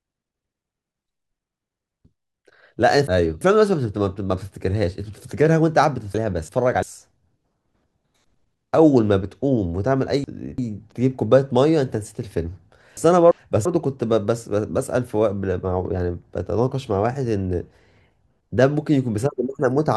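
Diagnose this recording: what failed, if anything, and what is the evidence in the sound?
Chunks out of order at the buffer stage. Around 2.05 to 3.41 s a 341 ms block of speech plays three blocks late. At 6.14 to 6.83 s, 10.24 to 10.92 s and 12.97 to 13.65 s a block plays one block late, so neighbouring blocks swap. Each swap sounds jumbled, with three hard joins. A spectrogram shows vertical broadband lines at the joins and formant tracks that jump. A waveform shows steps in level. The 341 ms block fits a 16384-sample buffer at 48 kHz.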